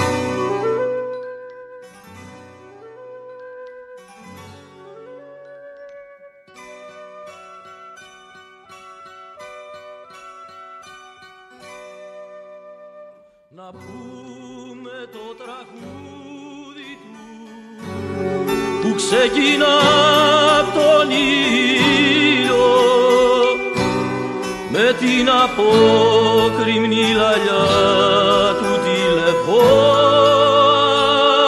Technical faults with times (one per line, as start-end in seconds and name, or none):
none